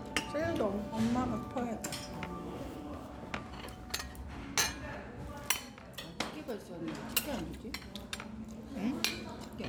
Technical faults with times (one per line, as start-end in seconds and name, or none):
none